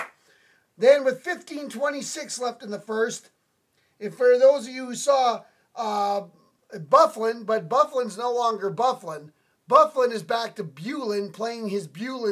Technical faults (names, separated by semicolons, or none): none